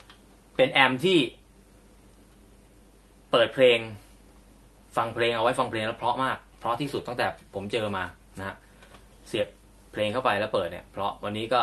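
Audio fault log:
9.41–9.45 s, short concealed packet loss: 20 ms of audio never arrived, so the decoder extended the preceding sound and blended back, leaving a brief smear.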